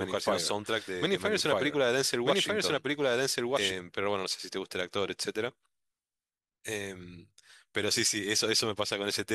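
From the first moment until 3.72 s, a doubled audio track plays: a second full-band copy of the speech trails about one and a half seconds behind at roughly equal loudness, likely from a slower capture path. Unlike an echo, it never decays and then cuts off abruptly.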